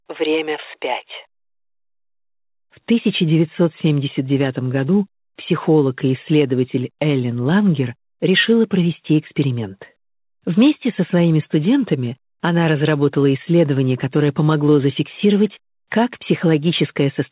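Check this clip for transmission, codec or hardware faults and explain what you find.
No transmission, codec or hardware faults are present here.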